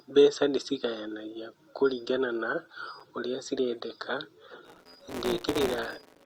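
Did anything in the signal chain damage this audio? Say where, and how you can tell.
Yes. At the stream-segmentation stage in playback, a gap between stream segments opens at about 3.00 s, between "mbeca ndĩcigayanagia kũringana na" and "ũrĩa cirendeka". The timestamps leave a short hole, and the player fills it with roughly 7 ms of hard-edged silence. The sound stops abruptly but none of it is lost.

In the processing chain, a filter restarted on every block from 4.65 s to the end at 6.25 s, just after "ũrĩa cirendeka". Each block starts from silence with a small transient, producing a 172 Hz buzz that tracks the speech level, which fits a 256-sample block.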